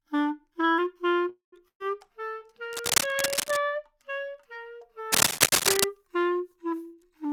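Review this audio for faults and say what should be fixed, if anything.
From 1.29 to 1.54 s the sound stalls for a call audio freeze: the last sound continues as a fading fill for about 229 ms, ending in roughly 120 ms of silence. Playback then resumes where it stopped, so nothing is lost but latency grows by 229 ms. The likely cause is delayed packets draining the jitter buffer. Deeper adaptive jitter buffering and a more stable network path would prevent this.

A burst of packet loss follows at 1.68 to 1.82 s. The receiver extends the preceding sound for about 115 ms, fading into roughly 90 ms of silence, then jumps ahead, so about 120 ms of audio is missing. Forward error correction or redundancy in the stream would prevent it.

Cable scratch noise appears from 2.73 to 3.60 s, at about the level of the sound itself, and again from 5.12 to 5.86 s, somewhat louder than the sound. Both are dense, irregular crackling bursts, likely from a worn cable or connector whose contact resistance varies as it moves. 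Replacing or reseating the cable and connectors would prevent it.

From 6.91 to 7.28 s a jitter buffer speed-up plays the audio at 112% speed with pitch unchanged. The receiver cuts short pitch-period fragments, around 50 ms in total, to shed excess buffered delay, and the result sounds hurried. Smoother packet delivery and gentler buffer adaptation would prevent it.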